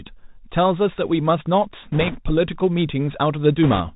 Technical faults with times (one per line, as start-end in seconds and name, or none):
0.00-3.96 Bluetooth CVSD headset codec
1.92-2.18 bit errors on a Bluetooth voice link
3.63-3.81 bit errors on a Bluetooth voice link